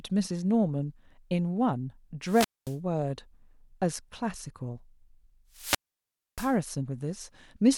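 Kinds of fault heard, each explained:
Wireless microphone squelch dropout: the speech twice gives way to a brief surge of hiss and then a hole of near silence, about 0.23 s long near 2.25 s and 0.63 s near 5.50 s. The analogue FM signal faded until the receiver's squelch muted the output.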